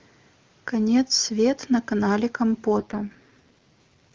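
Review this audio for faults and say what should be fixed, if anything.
From 2.78 s to the end of the clip at 4.14 s, the speech turns rough, buzzy and synthetic: an AMR rate drop. Before that point the AMR wideband (HD Voice) coding is clear, which fits its top rate of about 23.85 kbit/s. The raspy quality afterwards points to the lowest AMR-WB mode, around 6.6 kbit/s, chosen because of a weak radio link. Unlike a fallback to narrowband, the audio band stays just as wide, and unlike packet loss there is no gap or dropout. Improving radio coverage or signal margin where the call is made would keep the codec at its higher rate.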